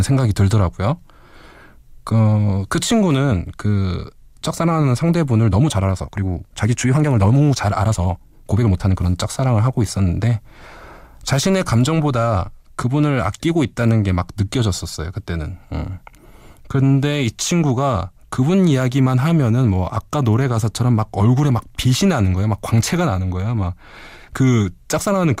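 From 5.43 to 9.05 s the speech suddenly hurries along, rushed, yet its pitch holds steady. This time-stretched section runs about 1.49 times faster, likely from software squeezing the passage to fit a length by dropping short slices of audio.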